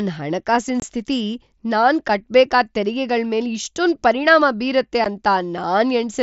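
At 0.80 to 0.82 s and again at 5.04 s, unconcealed Bluetooth headset packet loss leaves gaps of about 22 ms and 15 ms in the speech, each fitting a few lost headset frames replaced with silence. They sound like short holes with abrupt edges. On the waveform they are flat-edged dropouts; the mSBC spectrogram shows thin vertical blank slices.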